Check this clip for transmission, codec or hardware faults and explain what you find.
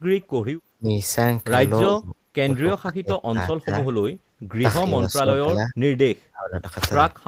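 Speech suppressed in double talk recurs at 0.1–0.98 s, 1.86–2.3 s, 2.73–4.07 s, 4.9–5.75 s and 6.31–6.63 s. The echo canceller likely mistook overlapping far-end talk for echo and attenuated this speech, so it dips or cuts out in pieces, dropping by up to about 30 dB.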